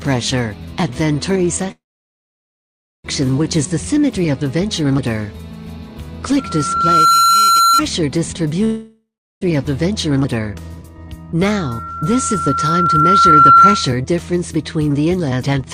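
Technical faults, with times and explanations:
1.71–3.06 s, call audio freeze: The sound stalls for about 1.33 s, the last moment smeared into a fading buzz and then roughly 1.24 s of silence, before resuming exactly where it stopped. This likely reflects delayed packets draining the jitter buffer: nothing is lost, but the playback is pushed later.
6.38–7.82 s and 11.41–13.96 s, loudspeaker feedback squeal: A microphone is picking up its own loudspeaker, and the loop gain exceeds one at 1.4 kHz. That single tone swells on its own, in about 0.7 s to roughly 5 dB above the sound the first time, then in about 2 s to roughly 10 dB above it the second time.
8.64–9.43 s, long network dropout: Audio likely stopped arriving and about 0.78 s was never played. The last sound is stretched into a fading hiss for about 0.4 s, then about 0.36 s of silence follows, and the sound comes back further on with the lost part skipped.
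10.39–11.05 s, jitter buffer speed-up: With too much audio queued, the receiver cuts short pitch-period slices repeatedly, about 0.1 s in total. Playback runs at 116% speed with unchanged pitch, so this stretch sounds hurried.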